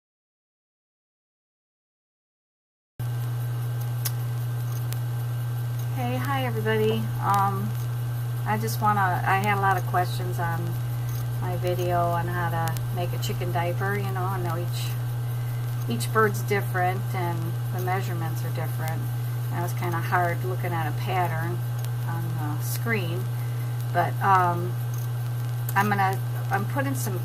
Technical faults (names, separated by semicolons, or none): word clock ticks